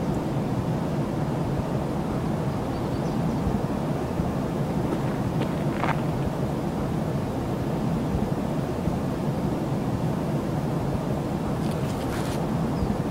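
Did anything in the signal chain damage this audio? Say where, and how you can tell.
No, no signal-chain damage detected.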